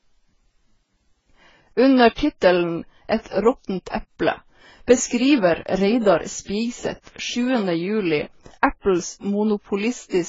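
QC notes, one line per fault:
Throughout, transcoding between lossy codecs: the speech has nothing above 7.6 kHz and carries two overlaid kinds of codec artefacts, heard together. The chain is likely a very low-rate AAC encode re-encoded as Vorbis near 30 kbit/s, the second codec spending bits on the first codec's damage. Unlike a single low-bitrate encode, the artefacts come from both codecs at once.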